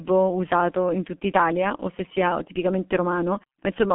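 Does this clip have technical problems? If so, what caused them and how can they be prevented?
Yes. G.723.1 codec damage runs through the whole clip: the speech is confined to roughly 200 Hz to 3.4 kHz with nothing above 3.8 kHz, so it sounds muffled, and the heavy, hoarse coding texture points to a very low rate of about 6 kbit/s. At that rate, the voice model refreshes only once per 30 ms frame, which smears fast consonant changes. Routing the call through a wideband codec at a higher bitrate would prevent it.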